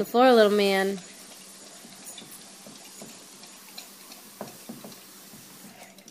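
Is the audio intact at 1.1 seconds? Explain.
No. At 1.1 seconds the sound is inside a Bluetooth SBC bit pool drop running from 0.89 to 3.57 s. The link cut the bit budget, which fits a fall to about 88 kbps. Upper sub-bands starve, so treble dulls and gritty quantisation noise rises.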